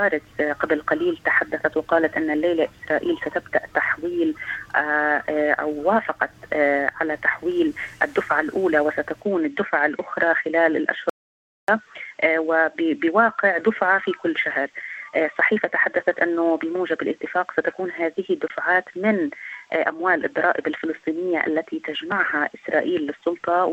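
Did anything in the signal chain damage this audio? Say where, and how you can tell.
Yes. An audio dropout to silence runs from 11.10 to 11.68 s, about 0.59 s of silence with no room tone, likely a lost input link upstream of the recorder.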